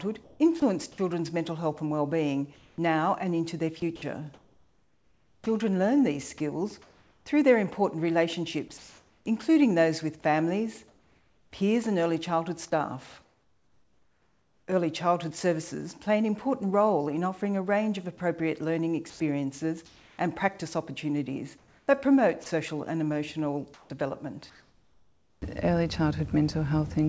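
From 0.24 to 0.98 s the sound is chopped by the voice detector. The sender's activity detector toggled several times, and about 240 ms of quiet sound edges were swapped for synthetic fill, likely RFC 3389 comfort noise. The result is choppy, with the background flickering between real and generated. The same sound chopped by the voice detector recurs from 2.56 to 7.26 s (about 1.88 s replaced), from 8.68 to 11.52 s (about 1.16 s), and from 18.18 to 20.18 s (about 440 ms).

Between 13.22 and 14.68 s there is comfort noise in place of the background. With nothing loud enough to trigger sending, the sender likely paused transmission and the receiver generated filler. For the whole 1.46 s the real background, which sits about 43 dB below the loud parts, gives way to a flat, featureless hiss about 5 dB quieter. The same substitution returns from 21.58 to 25.42 s, covering about 1.4 s in total.

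Inside that stretch, at 22.44 s, a single 20 ms piece of sound is dropped by the voice detector. A faint moment was likely classed as background and not sent, so it drops briefly into steady noise before the sound resumes.

Across the clip, nothing reaches above 8 kHz, which fits the wideband call codec on this path, consistent with G.722 at 64 kbps.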